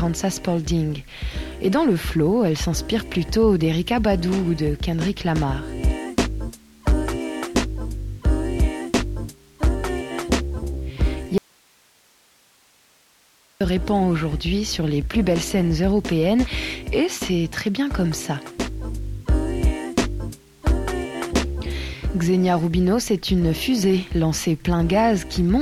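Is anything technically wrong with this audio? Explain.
Yes, there's an audio dropout to a faint residue from 11.38 to 13.61 s. The signal suddenly vanishes for about 2.2 s, leaving only hiss far below normal level, then snaps back. Likely the source feed broke while the downstream path stayed live.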